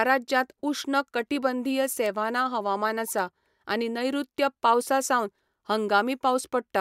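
Bit error spikes occur at 1.00 s after "राज्यांत उश्ण", 2.06 s after "राज्यांत उश्ण कटिबंधीय" and 3.19 s before "आनी नैऋत्य पावसा सावन". A flipped bit sends a sample or two jumping by a power of two and straight back, giving single broadband ticks unrelated to the speech, peaking around −29, −17 and −23 dBFS.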